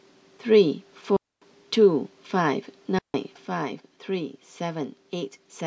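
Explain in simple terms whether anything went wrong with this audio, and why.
Twice, the digital wireless link carrying the speech lost too much data, and the receiver briefly shut the sound off to protect it. That is a digital wireless dropout. You hear it as a clean hole of near silence, with no crackle or hiss around it. The first lasts about a quarter of a second, from 1.16 to 1.42 s. The second lasts about 0.16 s, from 2.99 to 3.14 s.

From 3.46 s to the end, one of the two stereo channels drops out, most likely because a cable, connector or channel in the chain lost its signal. When the two sides are combined into one, the speech that was shared by both suddenly becomes noticeably quieter and stays that way. Anything that existed only on the missing side is gone entirely for the rest of the clip.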